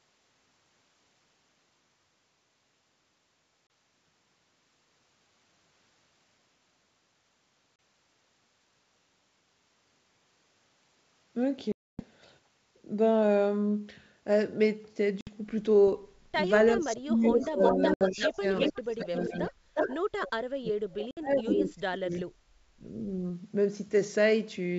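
Packets were lost on an ADPCM call at 3.67 s (30 ms), 7.76 s (30 ms), 11.72 to 12.03 s (270 ms) and 15.21 s (60 ms). Each gap is hard-edged silence, and afterwards the decoder's predictor and step size no longer match the sender's. The speech resumes slightly distorted, at times with a click or at the wrong level, then settles within tens of milliseconds.

From 16.76 to 22.85 s, speech is suppressed in double talk. The echo canceller likely could not tell the near talker from the loudspeaker echo and attenuated both. For about four seconds in total, the speech dips by up to around 30 dB, loses its high end or drops out in pieces.

From 16.96 to 19.96 s there is an echo leak. Residual loudspeaker pickup likely got past the far end's canceller and came back as a copy delayed by 363 ms, about as loud as the speech itself. Within that stretch, another packet loss at 17.94 s (70 ms) leaves the same hard hole and a disturbed restart. 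A further loss follows at 21.11 s (60 ms).

The echo leaks again from 21.5 to 22.24 s, with the same 363 ms delay and a level a little below the speech.

At 22.39 to 22.51 s the background is gated by the echo canceller. It clamps the microphone while the loudspeaker plays, and the room sound drops by about 13 dB for roughly 100 ms before it returns. Throughout the clip, the G.722 wideband coding at 64 kbit/s keeps the speech clear up to 7 kHz.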